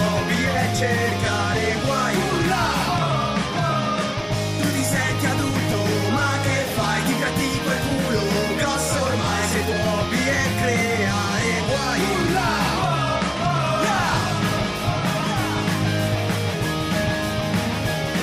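At 13.94 s a doubled audio track begins and runs to the end. A second copy enters abruptly, about 5 dB quieter, trailing by roughly one and a half seconds. It is dry and full-band. The likely cause is a slower second capture path.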